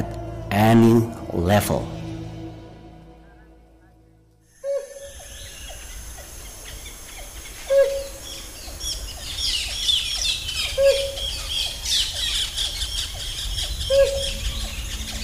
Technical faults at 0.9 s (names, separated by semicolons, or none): hard clipping